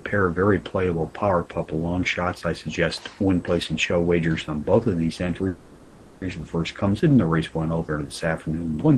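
At 5.47 s a call audio freeze begins: the last sound stretches into a fading buzz or hiss for about 0.74 s until 6.24 s, likely from delayed packets draining the jitter buffer. Then the audio resumes intact but 740 ms late. A spectrogram shows a smeared, decaying band, without silence.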